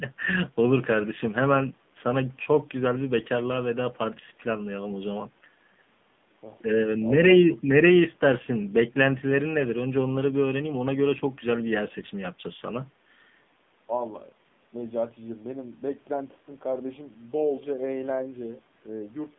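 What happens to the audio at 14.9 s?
At 14.9 s the speech is still passing through the AMR narrowband mobile codec, which runs at 7.4 kbps for the whole clip. It rebuilds the voice from a vocal-tract model and sparse pulses in a band of about 150 Hz to 3.6 kHz, so the voice sounds thin, buzzy and synthetic.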